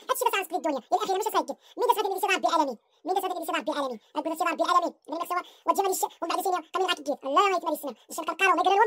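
The audio plays back at twice its proper speed and a full octave (12 semitones) too high from start to finish. This is audio read two samples at a time (double speed): the playback treats each pair of consecutive samples as a single frame, as if the data were stereo or twice as wide per sample, so time is compressed by half and upper content folds back into the audible band.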